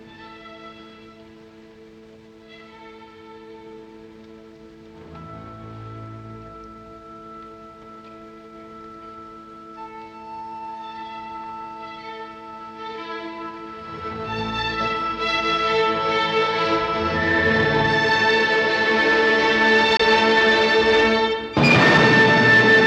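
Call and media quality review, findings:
Bluetooth dropout, 19.97–20.01 s: a brief silent hole of about 23 ms, then the sound picks up further along as if it never paused. Likely a late packet dropped on the headphone link; gap fits a single lost frame.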